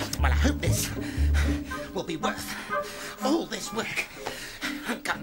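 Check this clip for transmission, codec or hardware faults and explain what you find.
Nothing stands out on a careful listen, so there's really nothing here to report or explain.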